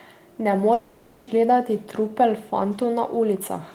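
At 0.73 s the speech breaks off. Until 1.30 s, a buzzy or hissy continuation of the last sound fills the gap and fades, with no true silence. Speech returns at "gledati trupel", and the lost half-second never plays. This is likely a long network dropout that the receiver papered over.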